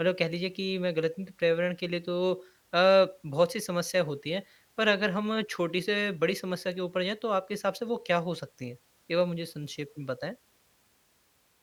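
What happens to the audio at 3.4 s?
Nothing goes wrong at 3.4 s; the speech runs through that moment intact, with no dropout, click, distortion or other fault.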